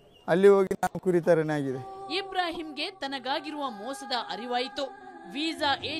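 At 2.52 to 2.57 s and 4.12 to 4.15 s, a corrupt frame is decoded. Flipped bits put energy at wrong frequencies. Each span gives a brief, out-of-place artefact.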